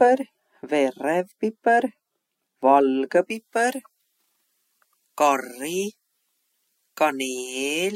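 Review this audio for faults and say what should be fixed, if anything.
From 3.3 s to the end, pre-emphasis is left on. The treble boost applied for recording or transmission was never undone by the matching de-emphasis, so the top end sits about 11 dB high at 10 kHz relative to 1 kHz, a shape which fits a J.17-style curve. The speech turns thin, bright and sibilant. To prevent it, pair every pre-emphasis stage with its matching de-emphasis on playback or decode.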